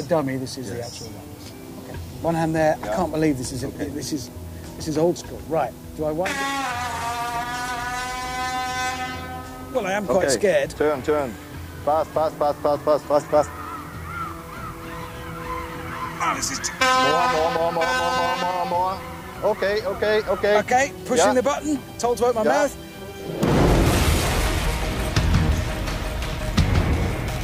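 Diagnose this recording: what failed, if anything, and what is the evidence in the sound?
Sample-format conversion failed: low bit depth with dither, 8 bits, leaves a steady, even hiss throughout, roughly 25 dB below the signal, with no distortion.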